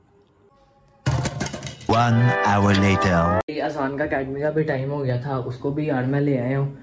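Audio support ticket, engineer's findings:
No faults found on listening; no dropouts, clicks, distortion or level problems observed, nothing to attribute to capture, transport or playback.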